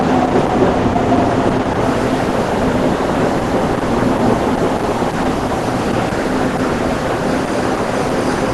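Opus compression runs through the whole clip. The audio stops at 12 kHz, and the damage is heavy: the sound is muffled and hoarse, with grainy, noise-filled texture where finer detail should be. That points to an Opus encoder starved of bits, likely at around 12 kbps, which pushes it into its hybrid speech-oriented mode. In that mode it codes a narrowed band crudely and fills the gaps with noise instead of leaving holes.

Low bit depth without dither sets in at 1.83 s and lasts to the end. The signal is likely rounded to very few levels, which fits about 6 bits. Because no dither was added, the rounding error tracks the sound itself, sitting roughly 25 dB below it. Quiet passages turn gritty, with a grainy distortion that shifts as the sound changes.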